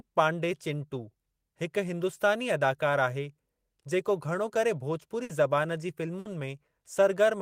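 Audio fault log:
5.23 to 5.32 s and 6.19 to 6.28 s, burst of packet loss: two short dropouts in the speech, each the same shape. A run of packets never made it in time, so the receiver kept the last bit of sound going for about 60 ms, fading it down, which is why you hear a brief smeared buzz or hiss. Then the talker picks up again with roughly 60 ms of speech just gone, giving that small jump forward.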